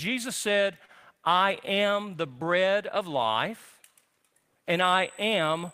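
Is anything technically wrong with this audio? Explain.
Yes, there are two faults.

Short stall from a late packet, 0.85 to 0.92 s, just before "I am the bread". A packet arrived late and the jitter buffer ran dry, so the receiver held the last bit of sound for about 31 ms until the data turned up, then resumed from the same point. Nothing is lost, but the speech hangs for an instant, with a faint buzz or dip, and everything after it plays about 31 ms later.

USB whine, from 4.82 s to the end of the clip. Current drawn by the USB bus in 125-microsecond microframes has leaked into the audio through the power or ground wiring. The result is a thin, steady tone fixed at 8 kHz, roughly 20 dB below the speech. It sits above the voice as a high whistle that does not follow what is being said.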